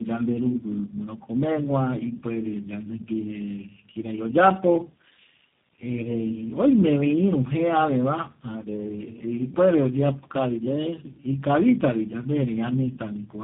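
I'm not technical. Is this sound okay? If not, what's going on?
No. The call passed through three different phone speech coders in a row, a fault called tandem speech coding, with each one re-squeezing the already damaged result. Throughout the clip the speech sounds rough, muffled and warbly, with nothing above 3.8 kHz.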